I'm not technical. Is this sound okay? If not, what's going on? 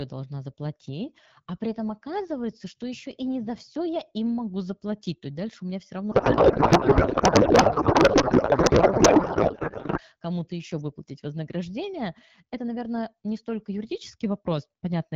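No. From 6.11 s to 10.0 s, right after "дальше у меня все", the speech turns into garbled noise and warble that barely follows the talker. This is a codec payload misread. The call uses the AMR wideband (HD Voice) codec, which sounds clear before and after this stretch. Here the sending side packed its data one way, in byte-aligned form, while the receiver read it as the compact form. The fields landed in the wrong places, so the decoder turned valid-looking data into nonsense until both sides matched again.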